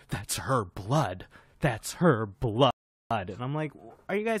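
Speech with a rebuffering stall from 2.71 to 3.11 s: the player ran dry and paused, inserting about 0.4 s of flat silence, a blank gap in waveform and spectrogram, before resuming exactly where it stopped.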